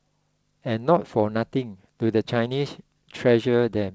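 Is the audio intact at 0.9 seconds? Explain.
Yes, the audio is intact at 0.9 seconds, with no dropout, glitch or other fault at that moment, only the normal band limit of the call path, which leaves nothing above 8 kHz.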